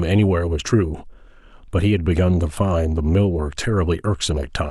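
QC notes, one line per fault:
Nothing to flag on this speech clip; no faults turned up anywhere in it.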